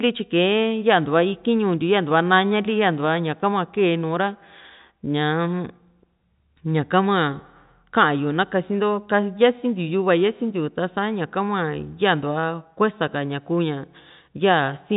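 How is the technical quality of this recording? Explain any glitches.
Nothing goes wrong anywhere in the signal, which carries the narrow, band-limited character of G.711 telephone coding with nothing above 3.8 kHz.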